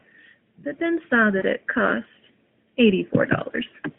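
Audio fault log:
1.38–1.44 s, lost AMR speech frames. A 40 ms gap, which fits two frames, is filled from the last pitch and vocal tract settings at falling gain. It sounds like a brief warbling dip.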